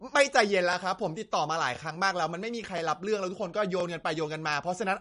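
From start to finish the speech has a watery, swirling quality, with plainly audible smearing and nothing at all above 10.6 kHz, so the top end sounds dull and abruptly capped. The likely cause is MP3 compression at a low bitrate, which fits something around 40 kbps: starved of bits, the encoder cuts off the treble at a fixed point and drops weak frequency components that flicker in and out between frames, producing that unstable, underwater texture.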